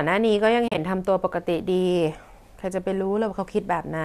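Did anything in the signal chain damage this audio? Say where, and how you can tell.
Yes. At the network and decoder stage, AAC frame loss with muting leaves soft-faded gaps from 0.68 to 0.78 s, the longest a few tens of milliseconds. Muted frames fade smoothly, unlike hard-edged buffer dropouts.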